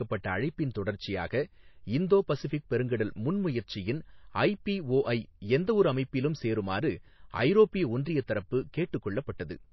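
Speech runs throughout with a watery, swirling quality and dull top end, most likely the result of MP3 compression at a low rate, around 24 kbps. A spectrogram shows a hard ceiling with nothing above 5.8 kHz and patchy high-frequency lines flickering between frames. Pre-echo appears at 0.74 s and 9.38 s: a short hiss leads each sharp attack by about 13 ms and 16 ms respectively, because quantisation noise spreads across the transform block. On the waveform it shows as a thin noise smear just before the onset.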